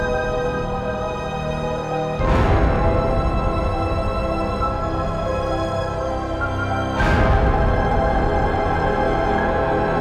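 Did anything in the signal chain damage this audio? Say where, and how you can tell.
Yes: hard clipping at a converter or other stage, from 2.24 to 3.48 s and 7.00 to 8.45 s. Peaks about 4 dB over full scale are cut flat, so the waveform shows flat tops and the spectrogram shows harsh harmonic smear high up.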